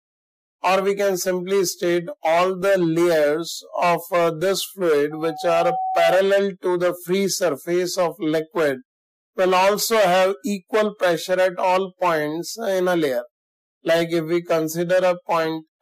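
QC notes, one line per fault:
5.11–6.37 s, loudspeaker feedback squeal: a steady 754 Hz tone swells up over about half a second until it's roughly as loud as the rest of the sound. The mic's hearing its own speaker, and the loop gain at that frequency tipped past one.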